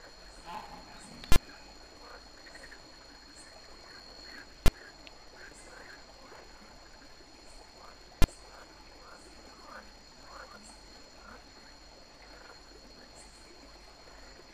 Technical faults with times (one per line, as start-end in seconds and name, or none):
0.00-14.54 filter restarted on every block
1.32-1.36 invalid numbers at full scale
4.66 invalid numbers at full scale
8.22 invalid numbers at full scale